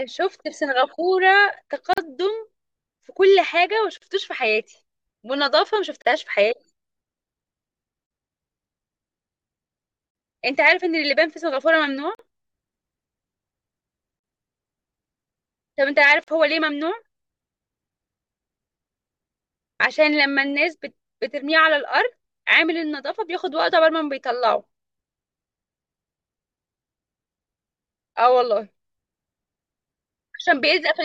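Short dropouts of about 43 ms (41 ms the first time) cut into the speech every 2 s, at 1.93, 3.98, 6.02, 8.06, 10.11, 12.15, 14.19 and 16.24 s. Their edges are smeared, and the speech resumes where it stopped. This is a gap at a join of encoded pieces: separately encoded 2-second segments were spliced without trimming each encoder's start-up delay and end padding.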